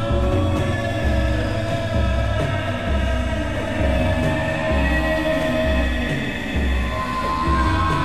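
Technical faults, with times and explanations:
No technical faults are audible anywhere in this music clip.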